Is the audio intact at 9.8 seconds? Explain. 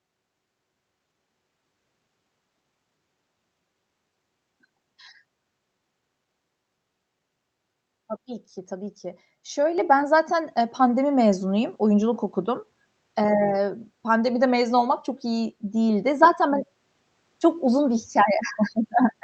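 No. At 9.78 s the microphone volume stepped up: the call software judged the input too quiet and raised the device's gain in a single step of about 5 dB, so the speech and the background jump louder together, just before "ben zaten e".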